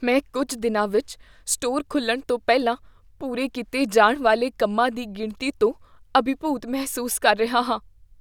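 No technical faults can be heard anywhere in this speech recording.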